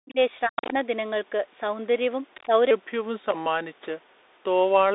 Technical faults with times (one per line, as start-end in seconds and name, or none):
0.00-4.95 Bluetooth CVSD headset codec
0.00-0.18 speech suppressed in double talk
0.47-0.75 speech suppressed in double talk
0.57-0.73 other side's voice leaking through
2.34-2.45 other side's voice leaking through
2.45-2.52 speech suppressed in double talk